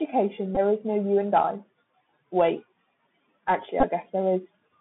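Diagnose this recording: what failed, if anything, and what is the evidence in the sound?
The speech sounds narrow and scratchy, with a granular hiss beneath it, harsh s sounds, and grit on louder passages. Everything is confined to roughly 150 Hz to 3.6 kHz. This is the Bluetooth CVSD headset codec, a codec-stage fault: a 64 kbps one-bit delta coder whose adaptive step cannot keep up with fast, loud changes.

Two short buzzy flutters mark a Bluetooth headset packet repeated fault on the radio link. The first is a brief buzz at 0.55 s, about 15 ms long, which fits roughly four lost packets. The second is a stutter scattered across 3.80 to 3.84 s, with its longest run around 15 ms. When packets were lost, the chip replayed the previous packet every 3.75 ms, producing a buzz near 267 Hz.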